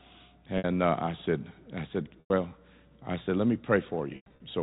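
Three gaps show packet loss with pitch repetition. At 0.58 to 0.64 s, about 60 ms drops out just before "uh I said I". The receiver repeats the last pitch period, so the sound holds briefly and turns buzzy. At 2.2 to 2.3 s, right after "I said I said", 100 ms goes missing. The held tone fades toward silence. From 4.16 to 4.4 s, 160 ms is lost in scattered bursts, the longest run 100 ms.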